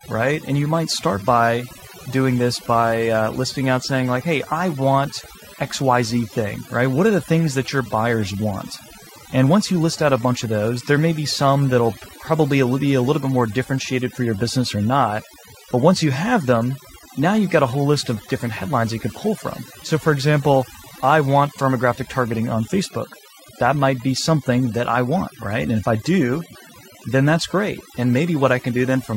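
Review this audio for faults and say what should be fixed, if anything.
The whole clip has overdone noise removal on the speech. The denoiser was pushed hard enough that bands sitting near its noise estimate get pulled right down, so the gaps go almost dead with little twinkly specks, and quieter parts of the voice get pulled down with them. Next time, back the reduction amount off and check the result against the raw recording before committing it.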